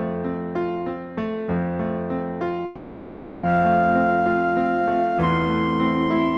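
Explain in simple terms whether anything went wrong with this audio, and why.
Something did go wrong, at 2.65 seconds. For about 0.8 seconds, until 3.45 seconds, the real sound stops. In its place you hear a smeared buzz or hiss that carries on the last sound and slowly fades. This is a long network dropout, likely caused by audio packets not arriving during the call. The receiver filled the whole gap with this made-up continuation. When the sound returns, the missing part is simply gone.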